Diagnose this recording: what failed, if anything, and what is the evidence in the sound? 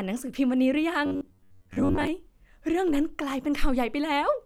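Driver or buffer stage: from 1.06 to 2.07 s the speech turns into a rigid metallic buzz near 94 Hz, the robotic sound from repeated short buffers. The likely cause is late audio, with a segment of about 10.7 ms replayed over and over, replacing most of the real signal.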